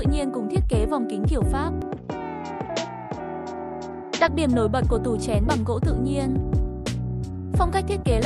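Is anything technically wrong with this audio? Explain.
Yes, there's one problem. From 1.82 to 4.28 s the sound goes duller and a few dB quieter, with nothing above 7.6 kHz and a new noise floor around 50 dB down. There's no gap at either change. That's likely the input switched to a poorer device, then back.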